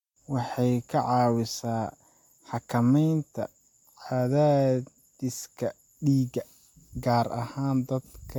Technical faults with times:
none

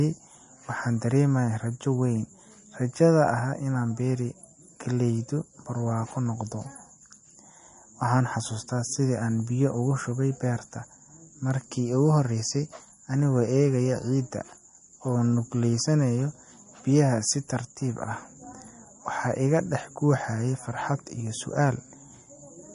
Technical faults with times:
0.00-22.75 MP3 compression

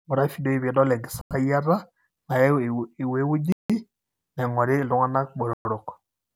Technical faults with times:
1.21-1.31 Bluetooth stall
3.52-3.70 Bluetooth stall
5.53-5.65 Bluetooth stall

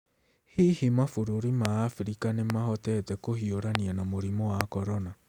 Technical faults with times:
1.65-1.67 loud pop
2.50-2.52 loud pop
3.75-3.77 loud pop
4.61-4.63 loud pop

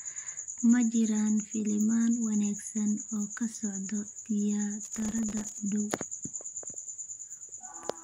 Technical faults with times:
4.83-5.58 processor overload crackle

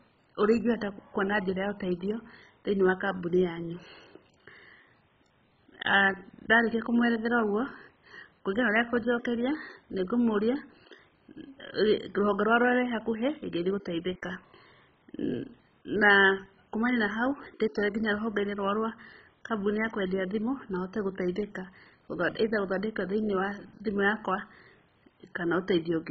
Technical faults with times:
0.00-26.10 MP2 compression

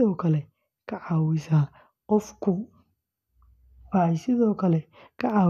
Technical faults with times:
none

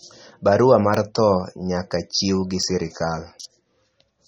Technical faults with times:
0.00-4.28 MP3 compression
0.94 block of digital silence
2.63 block of digital silence

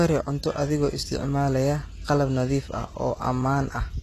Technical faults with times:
0.00-4.03 HE-AAC compression

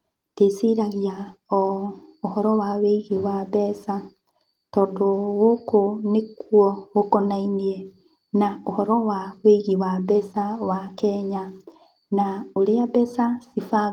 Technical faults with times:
none

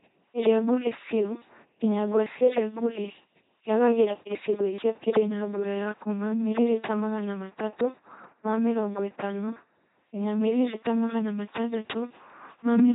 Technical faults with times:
0.00-12.95 LPC-10 vocoder

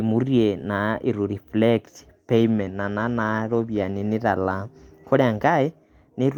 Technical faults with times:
2.33-4.21 call bitrate drop

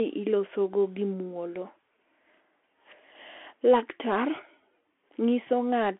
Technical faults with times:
0.00-6.00 Bluetooth CVSD headset codec

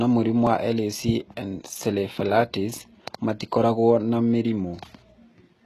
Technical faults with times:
0.00-5.65 HE-AAC compression

